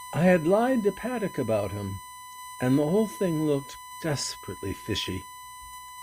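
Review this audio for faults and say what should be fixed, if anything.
A steady, fixed-pitch whine at 1 kHz sits under the speech for the whole clip, roughly 20 dB below it. This is USB whine: the bus draws current in 1 ms frames, and that pulsing leaks into the audio path through shared power or ground. Power the interface separately or add a ground-isolated USB hub to break the leakage path.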